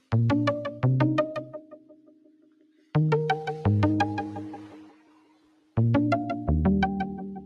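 From start to finish, a noise suppressor applied to music or sounds is at work. A processor built for speech is treating steady tones, ambience and decay as noise, so its gain swings through roughly 20 dB as the material changes. Sharp onsets pass while sustained parts and tails are pulled down, giving a pumping, thinning quality. Unlike a compressor, the level drops follow how steady the sound is, not how loud it is.

The sound is cut by the noise suppressor most heavily from 1.39 to 2.94 s, for around a second and a half, and again from 4.57 to 5.77 s, for about a second. Each dips by up to about 17 dB. Held and fading material sinks and its decay ends early, while transients keep their level. That sets these passages apart from a dropout or gate closure, where everything would vanish together.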